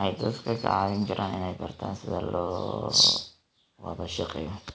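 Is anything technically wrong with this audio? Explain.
No, nothing's wrong here: the speech comes over a call link that sounds like it's working as intended, with nothing above about 8 kHz, which fits a wideband G.722 codec at 64 kbps.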